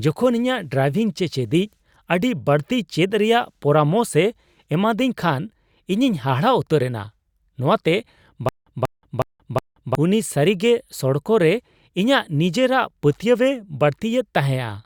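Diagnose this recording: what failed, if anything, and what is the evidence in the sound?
The playback or stream likely stalled and retried, producing a stutter with silent gaps from 8.49 to 9.95 s, just before "ᱩᱱᱤ ᱥᱟᱹᱨᱤᱜᱮ ᱥᱚᱲᱚᱠ ᱨᱮ". A 188 ms fragment repeats four times every 366 ms, with 178 ms of digital silence between repeats, so the audio from that stretch is lost.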